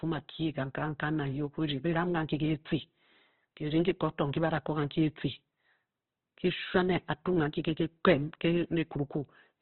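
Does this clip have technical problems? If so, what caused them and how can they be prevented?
Yes. The speech was likely squeezed through Opus compression at a very low bitrate, one that fits about 12 kbps, so the encoder narrows the band and fills the remaining bands coarsely. Throughout the clip, nothing sounds above 4.1 kHz, and the speech comes across muffled, grainy and rough. Encoding at a higher bitrate with full bandwidth would prevent this.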